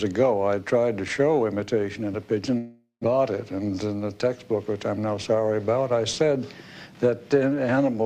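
A long network dropout runs from 2.57 to 3.06 s. For about 0.46 s the last sound is drawn out into a fading buzz that ends in roughly 0.14 s of silence. About 0.4 s of audio is lost, likely because packets stopped arriving, and playback resumes slightly later.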